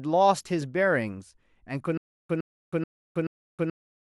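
At 1.98 s the speech breaks into a stutter with silent gaps that lasts to the end. A 111 ms fragment repeats four times. Each repeat is followed by 320 ms of digital silence. The likely cause is a stalled stream replaying its last fragment. The intended audio is lost.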